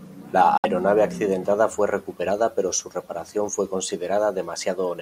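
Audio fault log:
0.58–0.66 s, Bluetooth dropout: sound cuts abruptly to silence, then resumes at "accidentada fue recuperada pero" with material skipped. Likely packets arrived late and were dropped.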